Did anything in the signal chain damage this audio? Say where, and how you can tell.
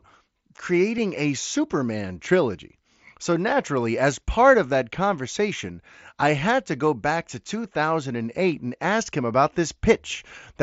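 Yes. Concealed Bluetooth headset packet loss at 0.97 s, on the wireless link between headset and phone. About 7.5 ms of audio never arrived, which fits a single lost packet. The receiver covered the gap by repeating the best-matching stretch of the waveform just before it, so the splice is almost inaudible rather than a click or dropout. The mSBC wideband coding, heard as its 8 kHz top end, sits underneath.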